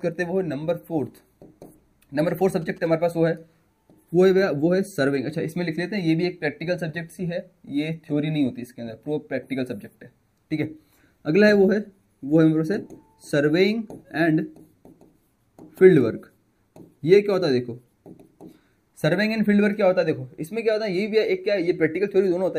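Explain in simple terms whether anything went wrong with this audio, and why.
GSM signalling bursts appear from 2.30 to 2.87 s as a quiet, galloping ticking and buzzing beneath the main sound. A nearby 2G phone was exchanging short radio bursts with its network, and the audio circuit turned them into sound, pulsing about 217 times a second.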